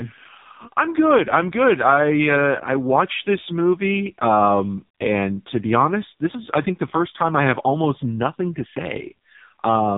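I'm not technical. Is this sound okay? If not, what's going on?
No. Throughout, the speech carries heavy AMR narrowband mobile codec damage: everything above 3.8 kHz is gone, and the voice sounds buzzy and synthetic, like an old phone call.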